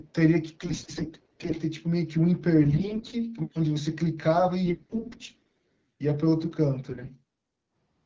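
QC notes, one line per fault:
0.61–1.58 s, 2.64–3.15 s, 4.66–5.66 s, 6.89–7.11 s, AMR bit errors: The sound turns hoarse, scratchy and gargly while pitch and loudness stay roughly in place. Flipped low-priority bits misplace excitation pulses and skew fine gain and spectral values. The spectrogram shows harmonics smeared into noisy, broken formant bands. The third burst is harshest.
3.47–3.66 s, echo leak: A faint copy of the sound arrives about 0.44 s late, roughly 25 dB below the main signal. This is likely residual loudspeaker pickup that the far-end echo canceller let through. The spectrogram shows a weak duplicate of the earlier harmonic pattern, offset in time.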